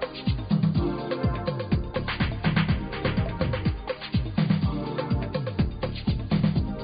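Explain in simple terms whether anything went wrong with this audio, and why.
Nothing went wrong; no problems can be heard here.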